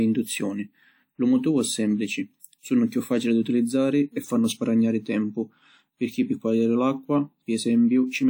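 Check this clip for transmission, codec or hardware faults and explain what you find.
One codec fault runs through the whole speech clip. Throughout, there is a ringing, washy smear with hiss that breathes with the signal, likely WMA compression at around 48 kbps, where long transform blocks spread quantisation noise over tens of milliseconds and zero weak spectral lines.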